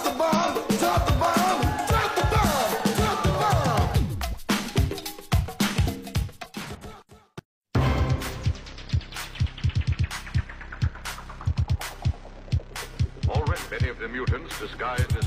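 Compressed frames are skipped at 0.33–0.48 s, 3.90–3.95 s, 6.41–6.46 s, 11.43–11.48 s and 13.52–13.57 s. The decoder drops whole frames, so the sound jumps ahead by roughly 50, 100, 150, 200 and 150 ms. On a spectrogram, harmonic and envelope lines break and resume offset. The waveform shows an abrupt envelope shift.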